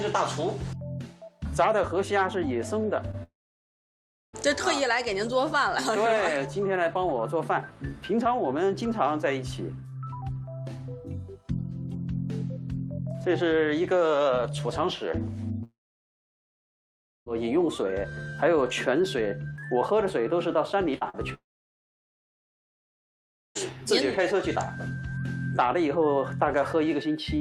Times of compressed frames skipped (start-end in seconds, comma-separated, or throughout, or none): none